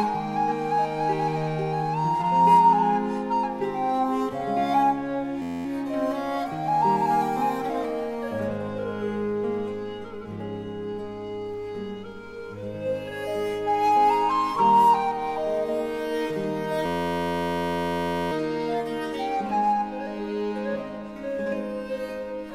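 A system hang loop at 5.42–5.65 s and 16.86–18.32 s repeats an 11.61 ms slice, likely a stuck 512-sample buffer, as a steady 86.1 Hz buzz rather than a random stutter.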